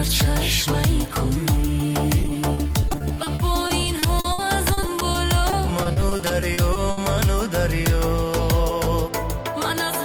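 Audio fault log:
2.19–6.98 s repeated packet loss (robotic sound): dozens of holes up to 70 ms, each filled by repeating prior sound, giving choppy sound with pieces missing; spectrogram shows stuttering, smeared blocks.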